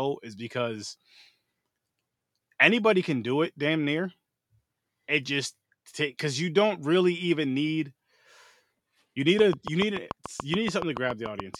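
From 9.39 s to 11.56 s the speech carries a train of clicks: a steady ticking at about 7 clicks per second, roughly fifteen in all, each standing out by around 10 dB. The pulses share much the same shape and keep an even pace, running through pauses as well, which sets them apart from random crackle or dropouts tied to the signal. The cause is likely interference from nearby equipment or a faulty connection or power supply.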